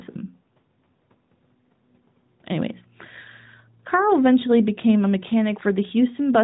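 No technical faults can be heard in the speech, which carries the usual narrow band of an AMR narrowband mobile call at 12.2 kbps after ordinary call microphone processing.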